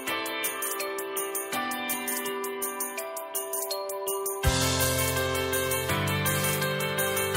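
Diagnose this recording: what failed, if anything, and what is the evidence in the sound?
Nothing has failed in this recording, and no stage of the chain shows a fault. There is no dropout, distortion, glitch or other defect to point to anywhere in the audio.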